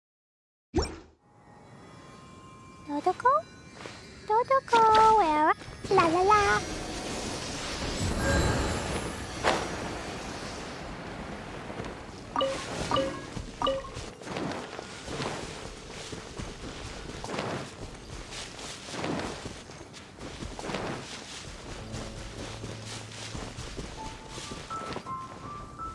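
No technical faults can be heard anywhere in this audio.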